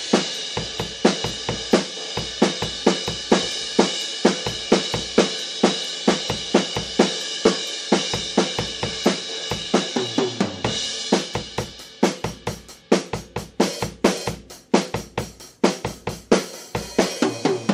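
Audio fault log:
No faults are heard anywhere in this audio. Nothing in it calls for a log entry.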